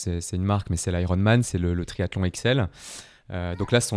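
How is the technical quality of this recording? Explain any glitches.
No technical glitches can be heard in this speech recording. There is nothing in it to explain.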